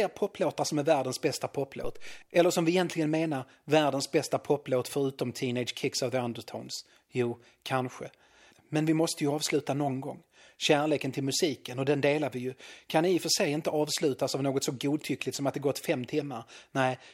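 A phantom power thump occurs at 1.84 s and has died away by 2.34 s in this speech recording. A supply voltage was switched on or off on a live input, and that sudden DC step passed through the coupling capacitors as a low-frequency pulse. It sounds like a deep thud peaking at about -27 dBFS, and its energy decays with a time constant of roughly 112 ms before the tail fades out.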